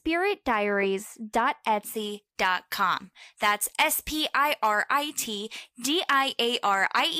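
From about 1.95 s to the end of the clip, pre-emphasis is left on. The treble was lifted before recording or transmission, and the matching de-emphasis was never applied afterwards. High frequencies stay boosted, by about 11 dB at 10 kHz relative to 1 kHz. The shape of the lift fits a J.17 curve. The speech turns thin and bright. Sibilants hiss and sharpen, and the lower body of the voice recedes.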